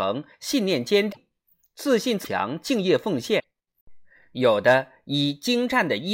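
A speech clip with three short glitches, at 1.11 to 1.17 s, 2.24 to 2.28 s and 3.38 to 3.44 s. Each lasts about two MP3 frames of 26 ms. The sound skips forward, then comes out as a brief chirp, burst of noise or gap. The likely cause is a broken MP3 bit reservoir. Frames were lost, and the following frames read leftover bytes from the wrong frame before decoding recovered.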